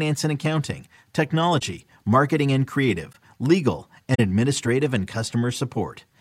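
Corrupt frame concealed at 1.59 to 1.62 s (before "marketing and"), 3.12 to 3.16 s (after "marketing and") and 4.14 to 4.20 s (before "administrative and") in this speech clip. The AAC decoder caught damaged frames and covered them.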